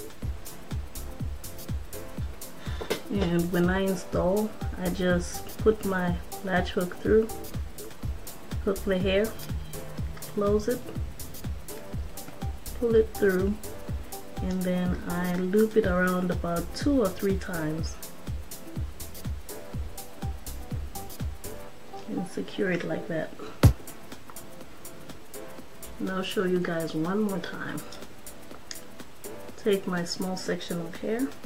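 Nothing is technically wrong with the clip.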